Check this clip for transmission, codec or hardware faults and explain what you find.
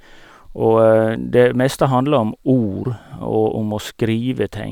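Nothing stood out on listening to the speech in this clip.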